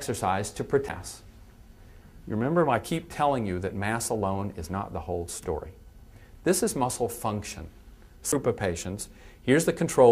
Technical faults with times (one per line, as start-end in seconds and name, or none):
0.89 CD skip
8.32 CD skip